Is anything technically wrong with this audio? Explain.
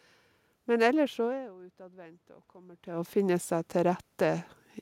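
Yes. From 1.15 s to 4.51 s the speech and the room noise behind it swell together, slowly growing by about 6 dB over more than three seconds. This is automatic gain rising. The input level dropped by about 20 dB, partly because the talker moved away from the microphone around 1.0 s; the talker moved again around 2.5 s. The gain control then raised its gain gradually to compensate, lifting the background along with the voice.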